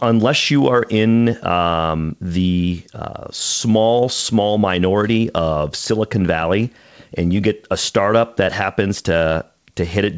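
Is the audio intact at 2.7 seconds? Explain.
Yes, the speech at 2.7 seconds is intact, carried through the G.722 call path with its usual band limit, nothing above 8 kHz, and with no dropout, glitch or other fault at that moment.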